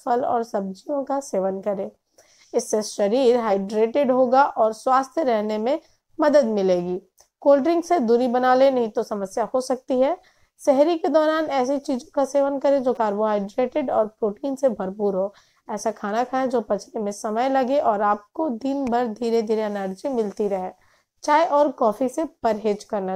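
Damaged data in a compressed stream, 12.94–12.98 s: misread frames give a brief glitch and a break in the spectrogram and waveform.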